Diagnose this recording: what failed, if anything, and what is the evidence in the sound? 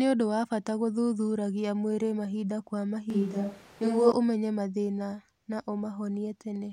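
From 3.10 to 4.12 s, between "gũthuthuragia mwĩrĩ mahinda kwa" and "ũmenye mathĩna na", the speech turns suddenly roomy and thin at about the same level. This is likely a switch to a distant microphone at the analogue capture stage.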